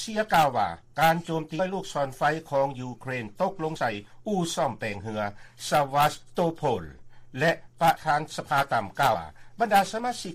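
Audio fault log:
1.58, 3.75, 7.96 and 9.13 s, compressed frames skipped: the audio leaps ahead by roughly 200, 50, 70 and 150 ms, in steps of 26.1 ms frames.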